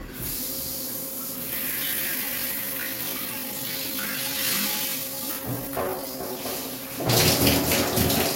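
From 1.67 s to 6.39 s there is a time-stretched section. The pace abruptly drops to about 0.64 times normal speed while pitch holds steady, and the stretch likely comes from software lengthening this stretch to fit a slot by repeating short pieces. The slowed passage drags. On a spectrogram, events spread horizontally with frequency bands at unchanged heights; the waveform shows repeated short segments.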